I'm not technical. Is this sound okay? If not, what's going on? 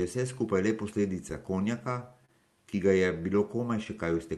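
No. The sending device's clock runs a few percent slower than the receiving one's. This clock drift between sender and receiver means the receiver keeps running short of sound.

To keep pace, the receiver makes repeated timing corrections from 0.69 to 4.13 s, stretching the speech by small amounts that add up to a bit under a tenth of a second. It can sound slightly slowed or unsteady.

At 2.26 to 2.30 s, a short stall from a late packet makes the receiver hold the last sound for 30 ms until the delayed piece arrives. Nothing is lost, but there is a brief drawn-out moment.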